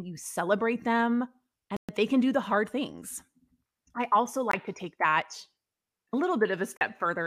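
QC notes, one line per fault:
1.77–1.89 s: Bluetooth dropout. A hard-edged silence of about 120 ms falls between "you celebrate them" and "they can do the". The likely cause is late packets being discarded, and the sound resumes further on, as if it had kept playing.
4.51–4.54 s: Bluetooth dropout. A brief gap of about 20 ms falls between "I also" and "to take that", consistent with a single lost packet.
6.77–6.81 s: Bluetooth dropout. An abrupt hole of about 40 ms shows the same skip-ahead resumption, suggesting roughly two packets went missing.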